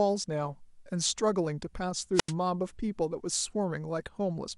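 A short speech clip with plainly audible MP2 compression damage throughout. The sound is dull and lacks top end, with a gurgling, granular texture on the voice. Upper sub-bands drop in and out from moment to moment, and the bands that remain are coarsely quantised. This is the character of MPEG Layer II starved of bits, likely coded at a low rate around 80 kbps, where the encoder cannot afford to keep all 32 bands active. From 2.14 to 2.33 s there is a wireless microphone squelch dropout. The received FM signal fades, hiss rises briefly, and then the receiver's squelch shuts the output for about 87 ms, leaving a hole of near silence. The voice returns once the signal recovers enough to reopen the gate. The whole event lasts under 0.2 s.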